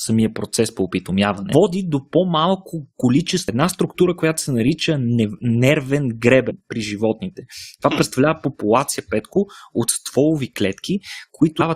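Damaged data in a compressed stream corrupts two stretches of the speech. The decoder misreads the bad frames and loses sync until it finds the next frame header, leaving a short blip at 1.52 s and another from 6.49 to 6.51 s.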